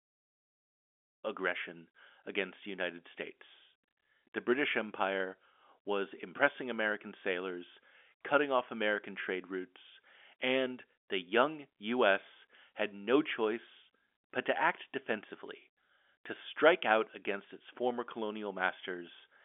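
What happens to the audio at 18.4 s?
At 18.4 s the speech runs on intact, with no dropout, click or other fault at that moment.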